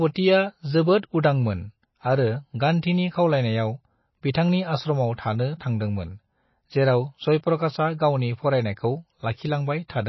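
Throughout the speech, the sound has a watery, swirling quality. Nothing is heard above 5.8 kHz, so the top end is dull and s sounds lose their hiss. Faint parts of the spectrum seem to flicker in and out, leaving a metallic chirp around sibilants and softened consonant onsets. The likely cause is MP3 compression at a low bitrate, around 24 kbps. Starved of bits, the encoder trims the treble and drops weak frequency detail frame by frame.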